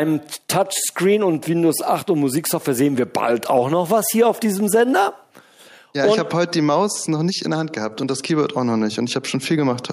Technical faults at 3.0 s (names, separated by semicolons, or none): none